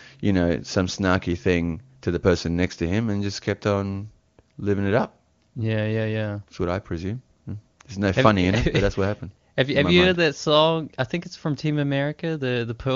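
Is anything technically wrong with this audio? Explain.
No, nothing here is technically wrong: the speech comes through the wideband AMR (HD Voice) link at its top rate of 23.85 kbit/s just as that path is meant to carry it.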